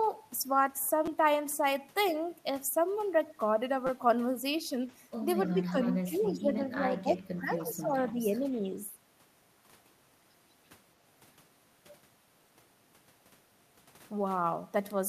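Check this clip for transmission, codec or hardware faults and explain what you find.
Yes, faults are present. The speech has two stutters from a repeated buffer, and a middle stretch with double-talk suppression and echo leak.

Repeated buffer at 1.06 to 1.07 s and 3.87 to 3.89 s. New audio came late. The device replayed its last block instead. Each block lasts 5.8 ms, which fits a 256-sample buffer. It plays three extra times at the first spot and four at the second. With blocks this short, each repeat is a brief buzz or click. About 20 ms of real audio is lost each time.

Speech suppressed in double talk from 5.54 to 7.55 s and from 7.71 to 8.45 s. The talker's level dips in pieces, by around 15 dB at the deepest. The dips add up to about 1.5 s in the first span and about 0.4 s in the second. The likely cause is an echo canceller. Both sides spoke at once. It could not separate its talker from the loudspeaker echo, so it turned everything down.

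Echo leak in five short scraps. They fall at 5.83 to 5.88 s, 6.56 to 6.76 s, 7.05 to 7.11 s, 7.6 to 7.65 s and 8.12 to 8.17 s. A faint copy of the voice returns 296 ms late. It sits about 20 to 30 dB below the speech. The likely cause is a loudspeaker on one side. Its echo canceller did not remove everything the microphone heard, and the leftover was sent back.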